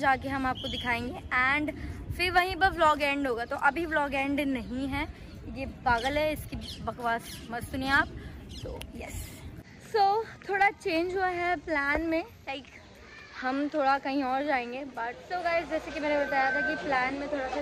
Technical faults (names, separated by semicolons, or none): loudspeaker feedback squeal